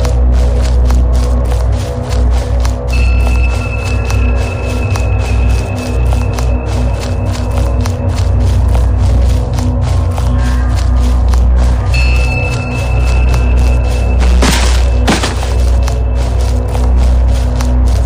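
Hard clipping runs through the whole clip. The signal is driven about 13 dB past what the stage can pass. Around a tenth of the samples hit the ceiling and are cut flat. Every loud moment turns into a harsh, buzzing fuzz.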